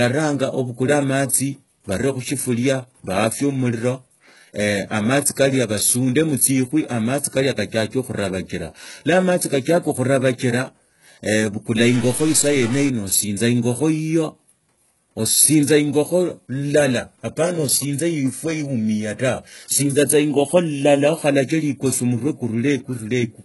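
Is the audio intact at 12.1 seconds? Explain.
No. At 12.1 s the speech falls inside a stuck bit fault running from about 11.81 to 12.88 s. The sound is likely caused by one data bit held at a fixed value, so roughly half of the samples are shifted by that bit's weight in a pattern that follows the waveform. The result is added noise and distortion riding on the speech for that whole stretch, with any gaps filled by noise.

The same moment also carries the HE-AAC compression artefacts heard across the whole clip, with heavy codec damage. The character of the treble points to a low bitrate, around 12 kbps, and the likely cause is HE-AAC coding. Only the lower spectrum is coded directly, and the upper range, which stops near 11.5 kHz, is rebuilt from copied lower bands. Because those copied harmonics don't align with the real ones, sibilants come out gritty or metallic.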